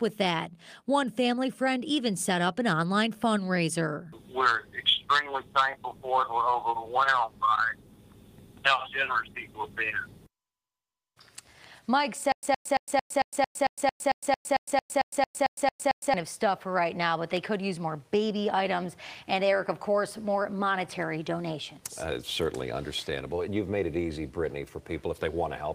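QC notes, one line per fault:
12.32–16.14 s, stutter with silent gaps: the same 115 ms fragment of sound repeats 17 times, each followed by about 109 ms of dead digital silence, giving an even cycle of roughly 225 ms. The likely cause is a stalled player or stream that replays its last buffered chunk on each retry, then runs dry before new data arrives. Whatever audio belonged to those four seconds never plays and is lost.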